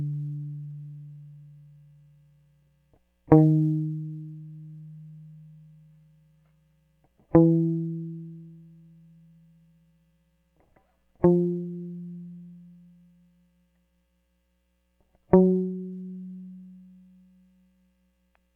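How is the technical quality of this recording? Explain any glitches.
The technical quality of this music recording is sound, with no glitches to explain.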